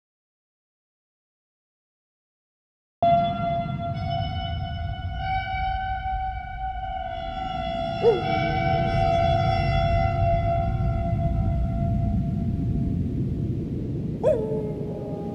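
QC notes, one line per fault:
0.00–3.03 s: audio dropout to silence. The clip opens in silence with no room tone, then the sound cuts in mid-flow at 3.03 s. The input was likely lost while silence was written, unlike a noise gate or quiet lead-in.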